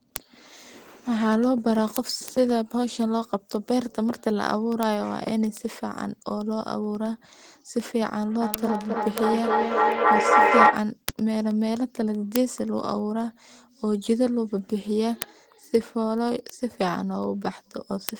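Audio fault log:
0.16–18.20 s: word clock ticks. About ten sharp ticks per second, each one dropped or repeated sample, as an unlocked receiver clock drifts a couple of hundred parts per million against the sender.
8.41–10.92 s: feedback echo between two devices. Speech returns roughly every third of a second, and the repeats pile up to about 8 dB above the speech as the loop between two devices builds instead of decaying.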